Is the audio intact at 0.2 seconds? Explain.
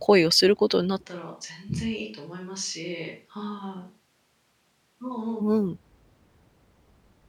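Yes, at 0.2 seconds the speech is intact, with no dropout, click, distortion or other fault audible at that point.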